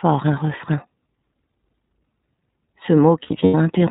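Throughout, the speech carries iLBC codec damage: a plainly audible rough, slightly synthetic edge, with nothing above 4 kHz, so a spectrogram shows a hard ceiling there. The coarse texture fits iLBC's 30 ms frame mode at about 13.33 kbps.

From 3.23 to 3.55 s, lost iLBC frames break the speech. Roughly 150 ms of audio, scattered over about 300 ms, is replaced by a repeated pitch cycle mixed with noise, which suggests around five missing frames. The longest gap lasts around a tenth of a second. These gaps sound like a held, buzzy vowel, and the waveform shows them as short, regular, periodic stretches. Normal speech returns almost immediately after each gap.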